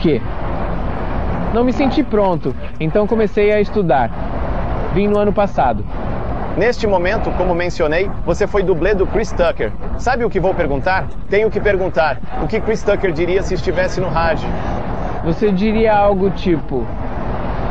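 No technical faults can be heard anywhere in the audio.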